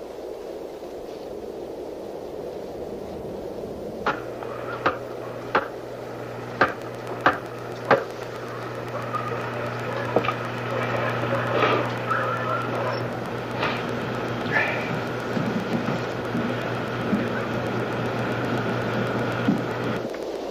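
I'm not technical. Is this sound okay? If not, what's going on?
No. A train of clicks runs from 6.7 s to 20.4 s: a steady ticking, nearly eight clicks every second, around a hundred in all. Each click sounds much the same and they come at an even pace, heard on top of the sound and through the quiet gaps alike. They stand out clearly above the sound. That regular, repeating pulse most likely comes from electrical interference from nearby equipment or a faulty connection or power supply.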